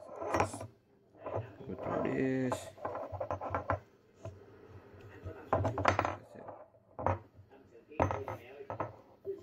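At 4.66 s a call bitrate drop sets in and lasts until 8.13 s. The call's bandwidth estimate has fallen, so the encoder is given far fewer bits to work with. It codes the sound much more coarsely. The texture turns rough and watery, and it stays that way for about 3.4 s at its worst. The degradation fits a fall from roughly 96 kbps to about 25 kbps. Quality returns once the bitrate recovers.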